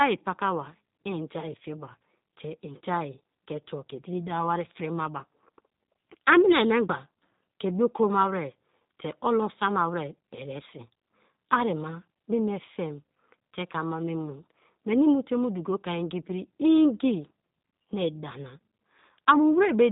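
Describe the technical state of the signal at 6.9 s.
At 6.9 s the speech carries G.729 codec damage throughout. Its pulse-based rebuild, consistent with 8 kbit/s, sounds rough and synthetic, and a spectrogram shows nothing above 3.8 kHz.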